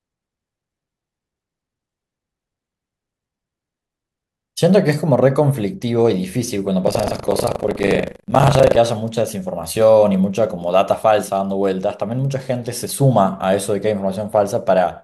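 From 6.84 to 8.78 s, buffer tearing: write and read pointers cross each period, splicing in stale audio, producing a hard 25 Hz robotic rattle on the speech.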